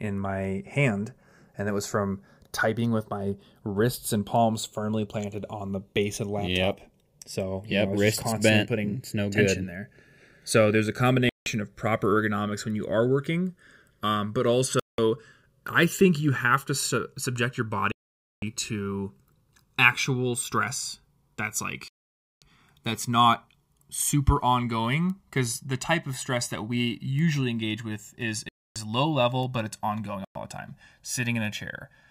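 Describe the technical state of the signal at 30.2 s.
A Bluetooth stall, likely from interference holding packets until the headphones' buffer emptied, cuts the speech to silence from 30.25 to 30.35 s, about 106 ms, before playback resumes. Underneath, the channels are drifting apart: their clocks differ by roughly 40 ppm, so the delay creeps toward about 1 ms, sweeping comb notches for a slow flanging in mono.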